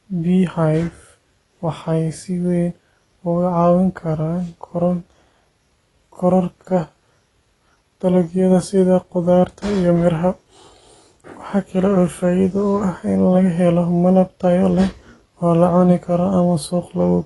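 From start to finish the speech sounds dull and smeared, with nothing above 11.5 kHz and a warbling, fizzy edge on sibilants. This is likely AAC compression at a low bitrate, around 32 kbps. Unlike a plain low-pass filter, it also leaves gaps and noisy patches within the band.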